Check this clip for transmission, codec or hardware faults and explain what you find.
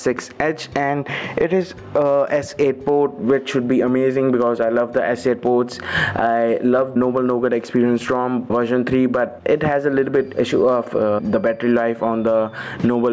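There's one fault, and it runs the whole length: gain pumping. The gain swings by roughly 15 dB. That points to a likely cause of input gain set far too high, with a fast limiter clamping down on each peak. The result sounds squashed, with loud and soft parts pushed close together. The call's microphone processing, with nothing above 8 kHz, isn't part of the problem.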